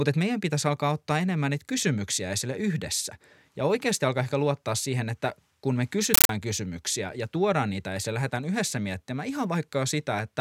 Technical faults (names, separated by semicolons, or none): compressed stream played as audio